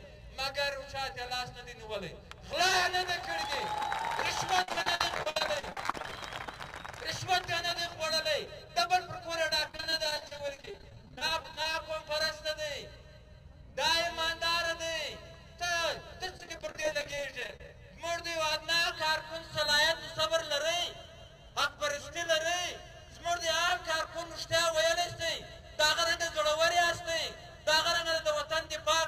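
Packets went missing or arrived late again and again in three stretches, at 4.62 to 6.12 s, 9.68 to 11.74 s and 16.26 to 17.69 s, and each hole was patched by carrying the preceding sound forward. This is repeated packet loss with its robotic sound. Concealment fills about a third of the first stretch and about a quarter of the other two, with gaps up to 61 ms, 32 ms and 30 ms, leaving the audio choppy with pieces missing.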